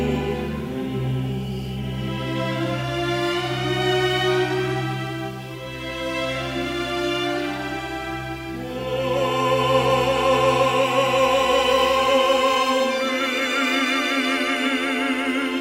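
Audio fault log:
No fault turns up anywhere in the recording, and the signal stays intact and continuous throughout.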